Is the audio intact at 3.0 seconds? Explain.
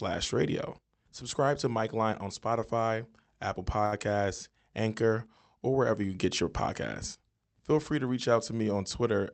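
Yes, the audio is intact at 3.0 seconds, with no dropout, glitch or distortion there beyond the ordinary band-limited sound of the call codec, whose upper range stops around 8 kHz.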